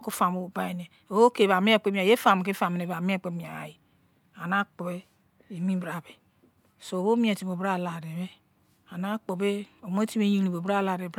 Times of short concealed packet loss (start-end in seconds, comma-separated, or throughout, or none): none